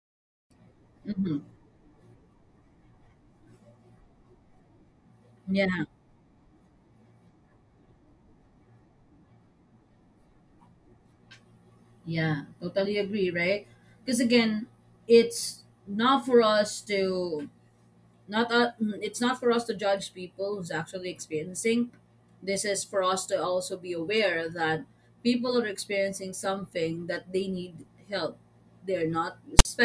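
At 29.59 to 29.65 s, file tags played as audio: text metadata decoded as samples gives a brief, hard-edged rasp, a DC-offset waveform block, then flat zero-padding silence.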